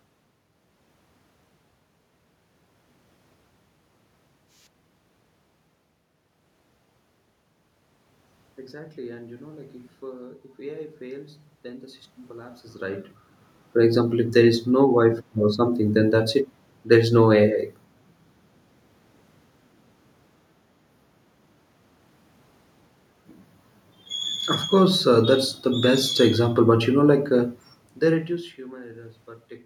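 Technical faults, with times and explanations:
No technical faults are present; the room noise in the background is part of the recording, and the level changes near 12.5 s and 27.5 s are the talker moving relative to the microphone, not faults of the system.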